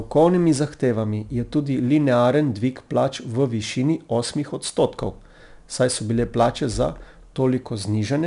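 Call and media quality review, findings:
4-bit ADPCM compression, whole clip: plainly audible gritty hiss tracking speech level, smeared sharp onsets, nothing above 10.6 kHz; step adaptation lags, fits roughly 89 kbps.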